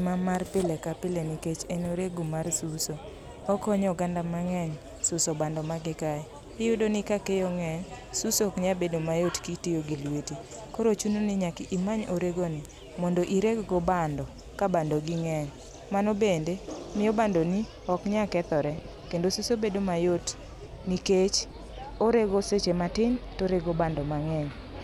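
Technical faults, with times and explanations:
No technical faults are audible in this speech recording.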